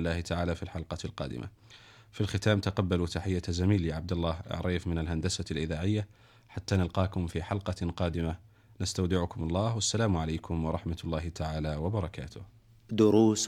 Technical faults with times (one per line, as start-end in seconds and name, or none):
none